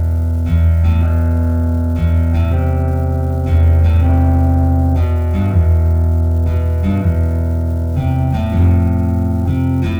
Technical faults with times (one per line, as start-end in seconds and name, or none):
0.00-10.00 unreliable data bit